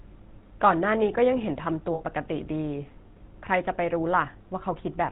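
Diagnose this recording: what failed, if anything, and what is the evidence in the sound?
The whole clip has that buzzy, gravelly roughness and nothing above 4 kHz, which points to the GSM full-rate codec at the codec stage. It sounds like a 13 kbps full-rate encode: a pulse-driven vocal-tract model with a coarse excitation, so the damage is plainly audible.

Around 1.94 to 2.02 s the speech turns into a short, rough metallic ring. That's lost GSM frames, a network-stage problem. The decoder kept repeating the last good frame, and about 60 ms of missing audio fits three dropped 20 ms frames.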